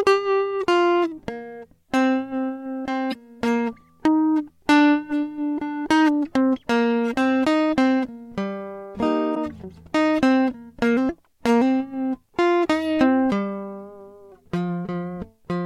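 At 3.10 to 3.15 s and again at 9.31 to 9.37 s, the music breaks into a brief glitch of roughly 55 ms: damaged data in a compressed stream. Corrupted bytes garble the decoded frames, so the decoder loses sync and searches for the next frame header.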